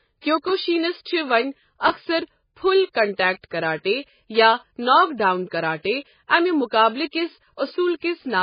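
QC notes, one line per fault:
Throughout: MP3 compression, heavy codec damage. The sound is watery and swirly, and attacks are smeared, likely from encoding at a very low bitrate around 16 kbps. Weak frequency lines switch on and off between frames, and the treble is cut. On a spectrogram, nothing shows above 5.1 kHz, with patchy, flickering energy below that.
0.48–0.50 s and 1.88–1.90 s: chunks out of order, twice, just before "چھِ وۄنۍ اکثر 'پُھل" and between "چھِ وۄنۍ" and "اکثر 'پُھل کنٹیکٹ کراٹے'". Each time, a 10.67 ms chunk plays one chunk late, giving a brief jumbled moment with three hard joins. On a zoomed waveform, those joins appear as abrupt waveform discontinuities.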